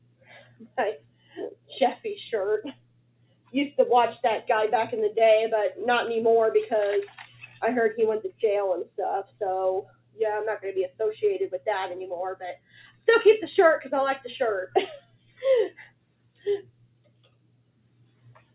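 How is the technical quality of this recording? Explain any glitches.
The quality is poor: a speech-oriented noise suppressor is running on this material and repeatedly pushes the sound down.

The noise suppressor, applied to music or sounds throughout, treats sustained and ambient content as noise. As a result, the level pumps and thins with swings of around 20 dB.

The noise suppressor cuts the sound at 0 to 2.05 s, 2.69 to 3.54 s, 7.27 to 7.62 s, 9.82 to 10.2 s, 10.89 to 11.22 s, 12.55 to 13.03 s, 14.67 to 15.28 s, and from 15.69 s to the end. Held tones and decays sink by up to about 19 dB, while sharper onsets come through largely intact.

The audio also passes through a call path. Nothing is present above 4 kHz, which fits a narrowband telephone codec.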